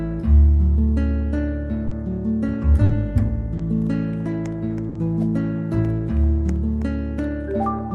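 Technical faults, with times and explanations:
1.87–1.93 s, 2.85–2.91 s and 3.57–3.61 s, short concealed packet loss: 40, 40 and 20 ms never arrived, so the decoder stretched the preceding sound over each hole, leaving brief smears.
4.89–4.97 s, burst of packet loss: a 60 ms run went missing, so the receiver held and faded the last sound, then jumped ahead with that stretch simply gone.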